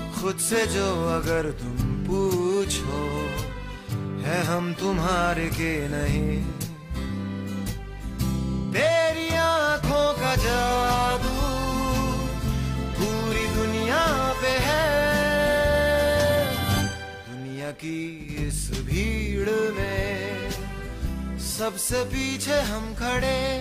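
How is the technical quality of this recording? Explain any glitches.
No technical glitches can be heard anywhere in the recording; the signal stays continuous and stable throughout.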